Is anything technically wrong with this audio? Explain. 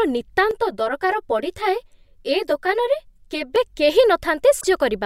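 Yes, two faults are audible in this speech clip.

Channel delay (comb filtering), from 0.51 to 3.56 s: one channel runs roughly 10 ms behind the other, and summing them to mono cancels shared content at evenly spaced frequencies, starting near 50 Hz. The result sounds hollow and phasey throughout that stretch.

Damaged data in a compressed stream, from 4.57 to 4.65 s: corrupted bytes make the decoder misread frames and lose sync while it hunts for the next valid header. This brief stretch is heard as a short glitch.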